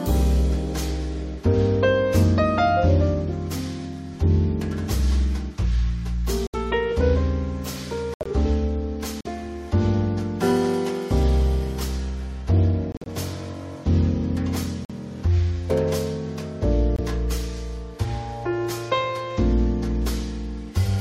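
At 6.47, 8.14, 9.21, 12.92, 14.85 and 16.95 s, corrupt frames are muted: the decoder rejects damaged compressed frames and the player inserts silence. Each dropout lasts 0.05 to 0.16 s and begins abruptly, showing as a flat waveform and a full-height blank column on a spectrogram, with no loss of timing.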